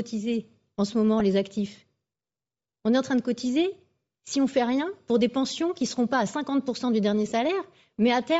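Throughout, the speech has a breathy, grainy edge, and the spectrogram shows the upper band filled with flat noise, likely from Bluetooth LC3 compression at a low bitrate around 32 kbps.

At 1.20 s, and again from 7.29 to 7.32 s, lost LE Audio frames leave brief noisy smears where the decoder repeats the previous spectrum. The second gap fits about three 10 ms frames. On a spectrogram these show as short blurred columns, and the waveform loses its structure there.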